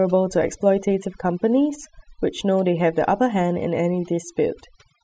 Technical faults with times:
0.00-5.03 overdone noise removal

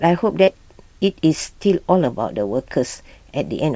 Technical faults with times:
0.44-0.49 short concealed packet loss

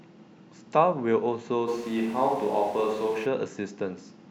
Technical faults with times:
1.69-3.24 switch to a distant microphone

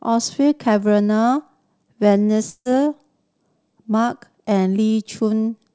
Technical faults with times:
2.50-2.67 long network dropout

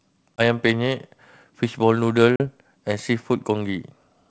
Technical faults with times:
0.37-0.41 packet loss on an ADPCM call
2.36-2.45 packet loss on an ADPCM call

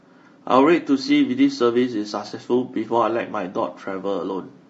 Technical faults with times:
0.00-4.69 low-delay AAC compression
2.27-2.32 AAC frame loss with concealment

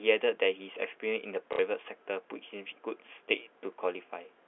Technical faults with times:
1.53-1.59 packet loss with last packet repeated

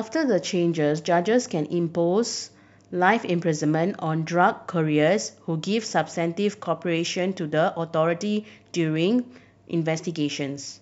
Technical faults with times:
4.35 dropped samples

